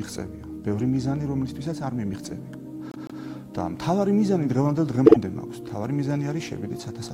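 At 2.91 s a stretch of repeated frames begins: a 157 ms block of compressed audio plays three times in a row, running to 3.23 s and adding 314 ms. It fits six frames written out again. The same happens at 5.06 s with a 52 ms block, likely two frames, played three times until 5.17 s. Both stutter audibly. A spectrogram shows identical patterns tiled side by side.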